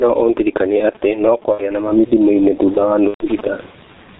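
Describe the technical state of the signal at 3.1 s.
VoIP packet loss concealed by the speech codec covers 3.08 to 3.28 s. About 120 ms of audio went missing, which fits four lost 30 ms frames, and the decoder filled the gap by extending its last pitch and filter settings at falling gain. The sound smears into a buzzy tone or a coloured noise that fades, and because each frame builds on the previous one, the signal stays weak or distorted for a while after the packets return.

The G.723.1 codec colours this moment as it does the whole clip. The heavy coding, consistent with roughly 6.3 kbit/s, removes everything above 4 kHz and tracks the voice model slowly, so speech sounds muffled and hoarse and consonants blur.

Gain pumping is also present here. The level swings by around 20 dB. This squashes the dynamics and is likely caused by excessive input gain driving a fast limiter.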